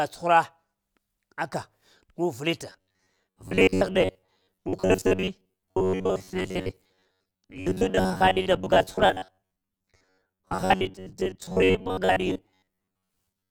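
From 2.70 s, just after "gu vilita", to 13.51 s, robotic sound from repeated short buffers sets in: a rigid metallic buzz at 93.8 Hz, likely from a 10.7 ms chunk replayed over about half the time. Spectrograms show evenly spaced harmonic lines, and waveforms show identical repeating cycles.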